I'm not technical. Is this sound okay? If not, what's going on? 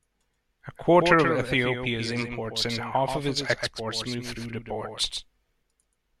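No, there's a doubled audio track through the whole clip: the speech plays twice, the copy a bit quieter and about a sixth of a second behind, likely from two mixed-in recordings.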